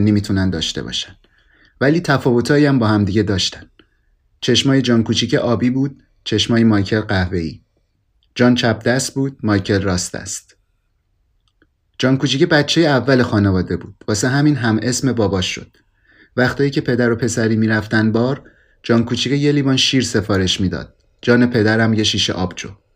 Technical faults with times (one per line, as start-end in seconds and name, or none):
none